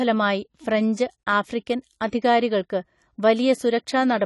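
Throughout, the speech carries plainly audible AAC compression, likely from low-bitrate coding. It sounds dull and smeared, and a spectrogram shows a hard ceiling at 11.4 kHz.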